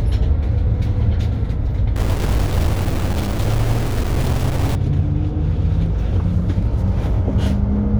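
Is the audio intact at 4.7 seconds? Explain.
No. From 1.96 s to 4.75 s a stuck bit affects the audio, likely from a broken data line or converter holding one bit fixed. Every sample that should have that bit flipped lands off by its weight, a step of around -20 dBFS, in a pattern that follows the waveform. The result is harsh, buzzy distortion, and quiet stretches fill with noise because that bit normally changes with the sign of small values.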